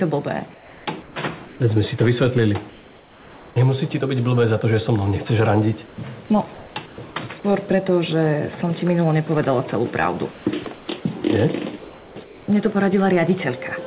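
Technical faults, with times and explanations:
0.54–1.16 s, 1.46–1.6 s, 2.7–3.56 s, 5.86–5.98 s, 6.54–6.98 s and 11.78–12.48 s, comfort noise in place of the background: in each pause the real room tone gives way to a flat, featureless hiss, in three of them about 2 to 4 dB quieter. That's likely discontinuous transmission, with the receiver filling the gaps with synthetic noise.
10.32–10.88 s, sound chopped by the voice detector: the detector likely flips on and off here, and about 300 ms in total gets swapped for fill noise. That clips quiet edges, heard against the narrow band, capped near 4 kHz.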